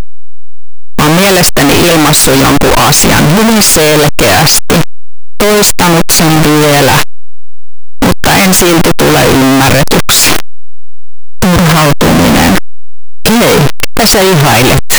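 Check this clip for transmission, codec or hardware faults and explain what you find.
There is one fault, and it runs through the whole clip. Signed and unsigned mixed up: the speech plays as very loud, harsh distortion, with quiet passages as loud as the rest. The likely cause is 8-bit samples read with the wrong sign convention, flipping the top bit so every zero crossing jumps across the full range.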